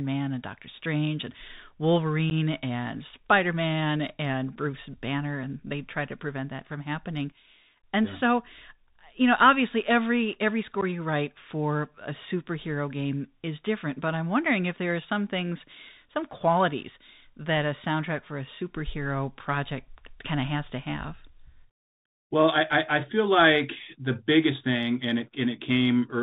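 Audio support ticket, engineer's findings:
Bluetooth CVSD headset codec, whole clip: speech band-limited to 4 kHz, granular hiss under speech, scratchy s sounds, distortion on loud high content where the adaptive step can't keep up. Consistent with a 64 kbps CVSD narrowband link, not wideband mSBC, which would pass content above 4 kHz.

Unconcealed Bluetooth headset packet loss at 2.30–2.32 s, 4.56 s and 10.81–10.83 s (after "know obviously every every", before "you write for a"): abrupt gaps of about 11, 7.5 and 11 ms, roughly two or three packets each, level briefly lower on return. Unlike concealed loss, the gaps are not filled.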